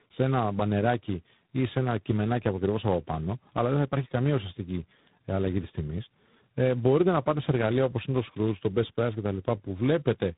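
From start to finish the speech carries tandem speech coding. It sounds like it went through three speech coders in a row, with the rough, gritty edge of a low-rate ADPCM coder like G.726 and the smeared, warbly quality of a packet-style coder like iLBC. Each stage re-encodes the previous stage's damage, so the artefacts pile up. Nothing comes through above about 3.9 kHz, so everything sounds muffled, a bit like a phone call.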